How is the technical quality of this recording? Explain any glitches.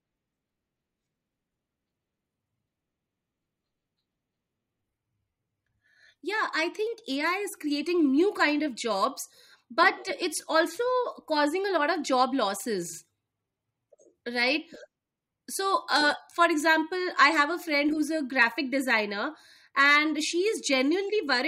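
No technical glitches can be heard anywhere in this speech recording. There is nothing in the audio that needs explaining as a fault.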